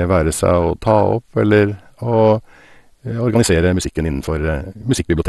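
A speech recording that sounds dull and gurgly from start to finish, with a granular roughness. The likely cause is MP2 compression at a low rate, consistent with roughly 64 kbps: the codec has shut off whole upper sub-bands and quantised the rest coarsely. On a spectrogram there is a hard ceiling at 12.2 kHz with nothing above it, and the bands below flicker in blocky patches. From 3.24 s to the end the pace suddenly jumps to about 1.73 times normal speed while the pitch holds steady, so the speech turns rushed. This is likely a time-stretched section, where software sped the audio up by dropping short pieces rather than resampling it. In the waveform the syllable envelopes crowd together after 3.24 s, yet the spectrogram's harmonic spacing stays the same.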